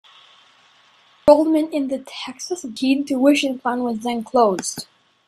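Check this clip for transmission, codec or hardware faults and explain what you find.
The clip has a codec fault: damaged data in a compressed stream, at 1.28 s just before "in the", and again at 2.77 s. Corrupted bytes make the decoder misread frames and lose sync until it finds the next frame header, producing a short chirp or blip in the speech.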